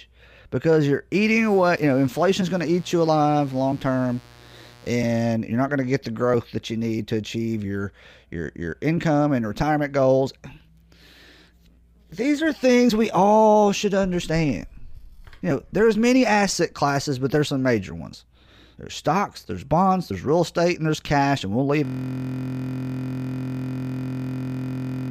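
Right after "because you're", from 1.23 to 5.34 s, a mains buzz sits roughly 30 dB below the speech before clearing ahead of "you're not going to". Sharp switching spikes from a dimmer, rectifier or poor shielding ride the 60 Hz supply, giving a raspy, harmonic-rich rasp reaching into the kHz range rather than a smooth low hum.

After "there's cash and we'll", at 21.85 s, a system hang loop takes over and lasts to the end. The machine froze while the audio hardware kept replaying one 23.22 ms slice, which fits a 1024-sample buffer. Because every pass is identical, it forms a steady 43.1 Hz buzz, unlike an irregular stutter or dropout.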